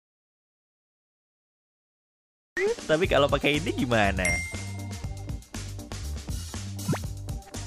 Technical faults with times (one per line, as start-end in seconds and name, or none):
0.00-2.57 audio dropout to silence